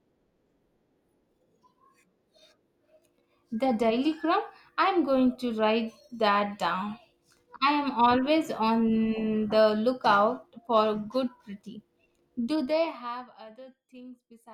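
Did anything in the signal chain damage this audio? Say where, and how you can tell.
Yes. Zipper noise runs from 12.44 to 13.41 s, while the speech level is pulled down by roughly 20 dB. A fine ticking rides on the voice throughout that drop, at around 200 steps per second. The gain stage is updating once per buffer instead of ramping per sample, so each jump in level leaves a tiny discontinuity. The rate points to a driver or buffer-level volume control with blocks of roughly 5 ms.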